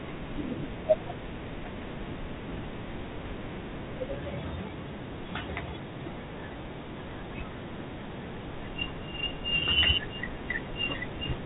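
A speech clip coded throughout with G.726 ADPCM. Everything above 4 kHz is gone, and a harsh, rasping hiss rises and falls with the speech level, which fits 24 kbit/s. Plain band-limiting would leave no such level-tracking grit.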